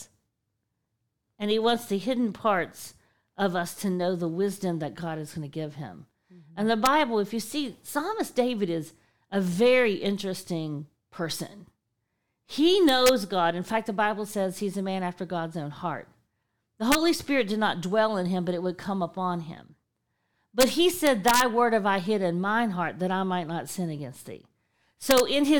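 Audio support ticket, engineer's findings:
Integer overflow at 6.86 s, 12.89–13.09 s, 16.92–16.95 s, 20.61–20.63 s, 21.07–21.41 s and 25.11–25.20 s. Violent cracks on loud speech peaks, harsher than clipping. Probable fault in a gain or mixing stage with no saturation. Peaks pushed only about 1 to 2 dB past the integer limit, yet each excess sample wraps to the opposite sign, swinging across the full range instead of holding at the limit.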